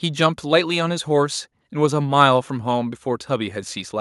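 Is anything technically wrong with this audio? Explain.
No, nothing is technically wrong with this audio.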